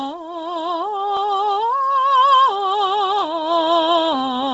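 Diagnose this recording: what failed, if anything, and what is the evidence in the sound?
The failure is at the codec stage: the music carries heavy Bluetooth LC3 compression damage from start to finish. Nothing survives above about 7.7 kHz, and the upper band that remains has a breathy, grainy wash, likely noise fill replacing zeroed spectrum at a low bitrate such as 24 kbps. A plain low-pass or sample-rate conversion would leave a clean, quiet top edge. Here, texture smeared in fine time slices fits short 7.5 ms transform frames.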